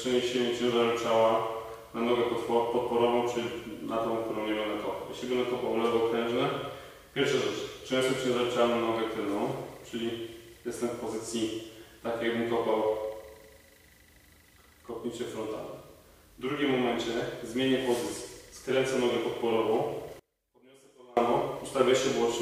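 One channel inverted, from 20.19 to 21.17 s: the audio suddenly drops by about 29 dB to a faint residue. This likely comes from one stereo channel flipping polarity, so the content shared by both channels cancels when they are summed to mono.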